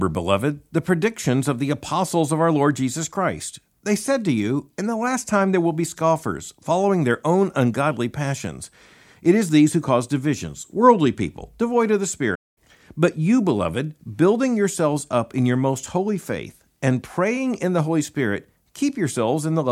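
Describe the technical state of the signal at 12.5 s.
At 12.5 s you're sitting right inside a playback stall. The output drops to silence from about 12.35 s to 12.58 s, roughly a fifth of a second (around 215 ms), just after "people devoid of the". The speech cuts off mid-flow and then picks back up. The likely cause is the player starving for data or having its audio thread blocked, so nothing reaches the output until it catches up.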